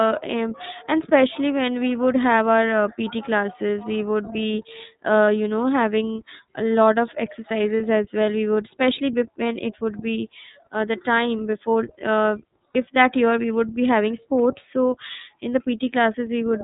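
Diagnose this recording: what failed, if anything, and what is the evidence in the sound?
iLBC codec, throughout the clip, at the codec stage: the speech is band-limited with nothing above 4 kHz and has a plainly audible rough, slightly synthetic texture. The encoder models each frame's excitation independently, and the sound fits iLBC's 30 ms frame mode at 13.33 kbps.

Lost iLBC frames, at 5.25, 7.77 and 12.73 s, at the network stage: each gap lasts about 30 ms, just before "you know having a", "as well" and "that year we would". Each points to one dropped packet. The decoder fills the hole by repeating the last pitch cycle mixed with noise, giving a brief held, buzzy vowel, then recovers at once.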